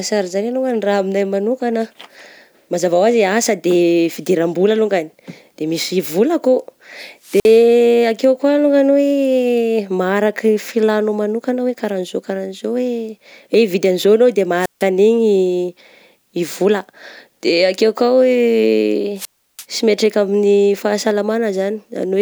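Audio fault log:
7.23–7.64 s, 14.60–14.84 s (just after "an'izao anao de") and 19.16–19.65 s (just before "sy mihatraika amin'ny"), wireless microphone squelch dropout: the radio link faded, so hiss swelled until the receiver's squelch cut the speech for about 52 ms, 153 ms and 338 ms, then reopened as the voice returned.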